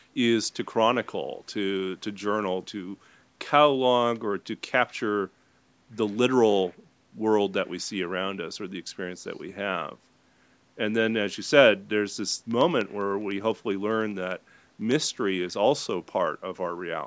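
From 12.31 to 15.01 s, periodic USB or driver dropouts put a tiny tick every 0.1 s, about thirty in all. Each is a gap of silence well under a millisecond, probably from a stalled bus or driver. Unlike random clicks, they are evenly spaced and sound only under signal.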